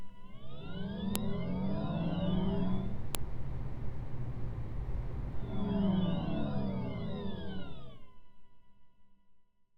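At 1.16 s and 3.15 s there's a sharp snap: file header played as audio, where joined pieces kept their header bytes, which play back as a loud click.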